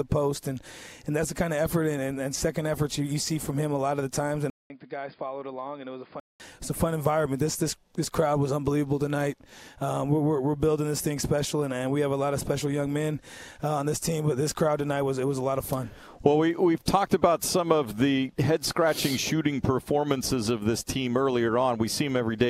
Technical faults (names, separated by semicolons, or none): input switched to a poorer device